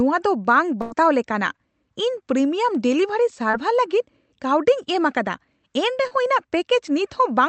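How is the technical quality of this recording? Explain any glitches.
The recording has three packet-loss glitches, typical of a call passed through a codec with an upper limit near 8 kHz.

From 0.81 to 0.93 s there is a burst of packet loss. About 0.1 s of audio never arrived. The receiver stretched the last sound and faded it, giving a held buzz or hiss. Speech then jumps ahead, skipping what was lost.

At 3.51 to 3.55 s and 6.07 to 6.13 s, short concealed packet loss appears. A few hundredths of a second went missing each time. The gap was patched by extending the preceding sound, then blended back in. Each spot is a brief smear or wobble.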